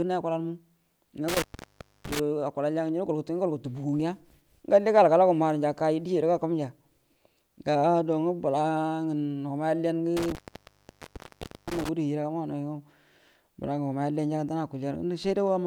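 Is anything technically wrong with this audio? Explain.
Yes. This speech clip has an intermittent contact fault, twice. From 1.28 to 2.20 s the signal drops for about 0.63 s. From 10.17 to 11.89 s it drops for about 1.36 s, ending just before "gudu hijiraga maunauyo". A loose plug or cable briefly opens the circuit. Crackle marks each break, and faint hiss fills the gap.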